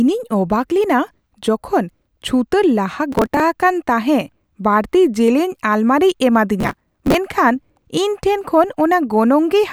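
Processor overload crackle occurs twice in the speech: from 3.12 to 3.40 s, right after "ᱪᱷᱩᱛᱟᱹᱨ ᱞᱟᱦᱟ", and from 6.60 to 7.14 s. Very short buffers, around 1.5 ms, repeatedly miss their deadlines and are skipped. The resulting hard-edged gaps form a gritty, tearing crackle.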